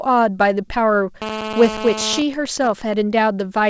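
From 1.22 s to 2.17 s there's GSM phone buzz: a 2G handset on a call nearby is pulsing its transmitter 217 times a second, and the audio circuit rectifies those bursts into a harsh, raspy 217 Hz drone with lots of harmonics, sitting about 7 dB below the speech.

Right at 2.17 s it changes into GSM signalling bursts, running to 2.94 s. The phone's user has gone quiet, so the handset only sends short groups of bursts, and you hear even ticks with a longer 217 Hz buzz twice a second, around 10 dB under the speech.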